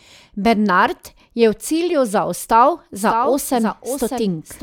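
From 2.96 s, after "je v cilju zaostal", a second copy of the speech trails about 0.7 s behind, about 5 dB quieter, until the end: a doubled audio track, likely from a delayed duplicate path.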